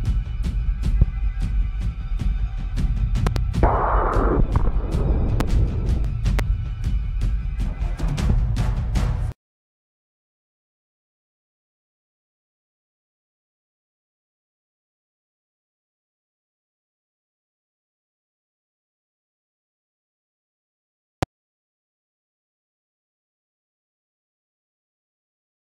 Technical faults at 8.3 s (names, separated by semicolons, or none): loud pop